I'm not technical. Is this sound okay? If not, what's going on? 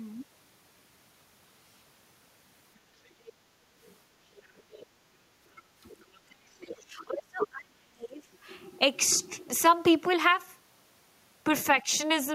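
No. There are two problems, both of which likely come from the call's echo cancelling not fully coping.

Other side's voice leaking through: a second voice sneaks in at 3.06–3.33, 3.83–3.95, 4.37–4.86, 5.90–6.18 and 6.70–6.75 s. It's a separate, quieter voice added on top, not the main talker getting quieter.

Speech suppressed in double talk: from 5.54 to 8.24 s the main voice repeatedly sinks, sometimes almost to nothing, for about two seconds in total, while the other side is talking. A small, brief dip recurs at 11.83–11.91 s. Unlike the leak, nothing extra appears. The wanted voice itself gets pushed down.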